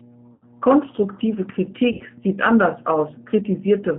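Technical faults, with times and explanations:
Throughout: mains hum. A steady low tone sits under the speech at 60 Hz, roughly 20 dB below the signal, which points to a ground loop or a nearby transformer feeding the power line frequency into the audio path. Because it is constant and tonal, it stays audible in the pauses between phrases and adds a dull drone beneath everything, most noticeable where the speech itself is quiet or absent.
Throughout: G.729 codec. The speech has passed through an 8 kbit/s G.729-type coder on a telephone line limited to about 150 Hz to 3.5 kHz. The codec rebuilds each 10 ms frame from a vocal tract filter, a pitch predictor and a sparse set of pulses, so fine detail is lost. The damage is plainly audible: the voice sounds thin, slightly rough and synthetic, with no content above the band edge.
0.34 to 0.46 s and 1.92 to 2.04 s: VoIP packet loss concealed by the speech codec. 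In each case about 80 ms of audio went missing, which fits four lost packets. The decoder filled the gap by extending its last pitch and filter settings while lowering the gain, so the speech stretches into a fading, buzzy tone or coloured noise. Because each frame depends on the previous one, the voice stays weak or distorted briefly after each gap.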